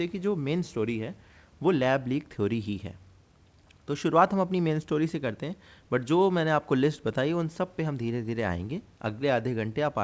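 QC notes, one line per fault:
No faults heard; nothing to flag on this one.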